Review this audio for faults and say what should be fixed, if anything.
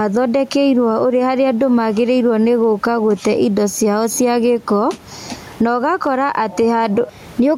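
Gain pumping runs through the clip: the room noise, about 33 dB below the speech, swells in every pause and ducks under each loud syllable by around 15 dB, squashing the dynamics. Likely the input gain is far too high and a fast limiter keeps pulling it down. Lower the microphone gain so peaks stay well clear of the limiter, and slow or disable any automatic gain control.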